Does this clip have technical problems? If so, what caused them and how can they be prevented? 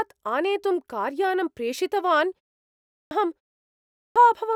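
Yes. There's a clipped start after a pause, twice: after a short gap of about 0.33 s, the speech comes back abruptly with its onset missing, from 2.65 to 3.11 s (roughly half a second gone) and again from 3.65 to 4.16 s (about 0.51 s lost). The output device seems to drop into a sleep or power-save state during the gap and needs that time to wake and relock, so the opening of the next phrase is swallowed. To prevent it, keep the output path awake by disabling device power saving or feeding it a continuous low-level signal so it never idles.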